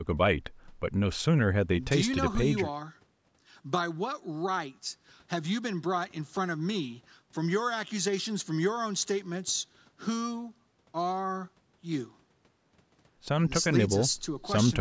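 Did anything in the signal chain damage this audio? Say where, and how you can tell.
No, the speech shows no damage from any stage of the chain; it has passed through ordinary call microphone processing, whose high-pass filter trims the lowest bass and whose band tops out at 8 kHz, both normal behaviour rather than faults.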